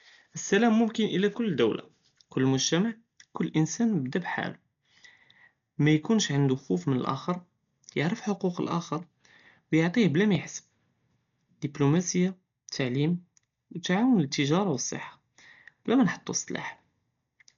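The speech in this clip is dull and band-limited throughout, with nothing above 6.9 kHz and a rough, fluttering noise hanging around voiced tones. That points to heavy Dolby Digital compression, likely AC-3 at a very low bitrate of around 48 kbps, where many frequency lines are left without mantissa bits and the decoder fills them with dither noise. The noise-filled flutter is what separates it from a plain low-pass filter, which would sound muffled but clean, and from MP3's swirly, watery artefacts. At 10.35 s, right after "ו יעטיה בלא מא", there is a block of digital silence only about 0.67 ms long, so short that it is heard as a tick or dip rather than a hole. The sound cuts out and returns with no fade. It is a single, isolated event with no ringing or decay, which sets it apart from the scattered crackle of a damaged recording or from clipping, which would follow loud peaks.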